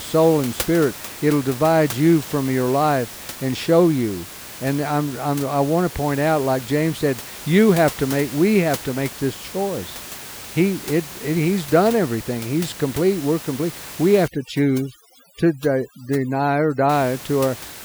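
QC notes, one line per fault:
14.28–16.89 s, overdone noise removal: just after "complete we're complete we", a noise reduction stage clamps hard on every band near its noise estimate, cutting the room noise (about 16 dB below the speech) down into twinkling specks.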